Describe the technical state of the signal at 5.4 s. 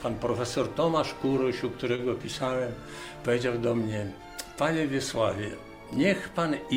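At 5.4 s the signal is intact, with no technical fault present at that moment.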